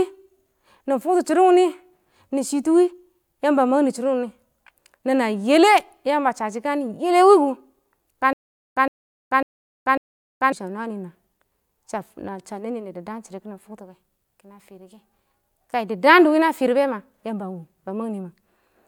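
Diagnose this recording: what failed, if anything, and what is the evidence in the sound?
From 8.33 s to 10.52 s the speech stops moving forward and a 114 ms fragment repeats four times. Each burst is followed by about 435 ms of dead digital silence, so the stutter with silent gaps has an even 548 ms rhythm. The stage is likely playback or streaming: the stalled player re-served its last buffered fragment at each retry, then ran empty. The audio due in that stretch never arrives.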